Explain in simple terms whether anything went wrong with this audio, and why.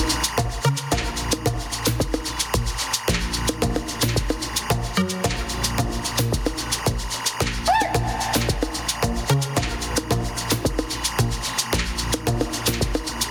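A faint, steady chirping warble runs behind the sound for the whole clip, flicking between two high pitches around 1 and 2 kHz. This is timecode bleed: a timing signal running at 24 frames per second, meant for another track or cable, has leaked quietly into this audio.

The sound is also squashed, and this continues throughout. Loud and quiet moments end up squeezed close together. This is gain pumping, likely caused by the recording level being set far too high and an automatic level control pulling it down hard on each loud sound.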